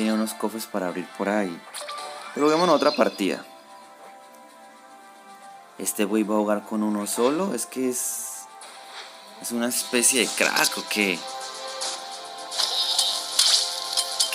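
At 11.94–11.96 s the audio jumps forward by roughly a tenth of a second, consistent with compressed frames skipped: a few whole frames, which fits a 23.2 ms frame length, were never decoded.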